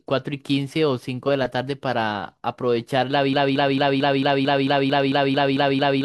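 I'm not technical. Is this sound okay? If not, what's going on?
No. At 3.33 s the speech gets stuck. A tiny piece, about 0.22 s long, plays over and over, back to back, about 12 times. It never recovers, and the loop runs right to the end of the clip. This is called a broken-record loop. The likely cause is the player or stream stalling and repeating the last scrap it held. Whatever should have been said after 3.33 s is missing.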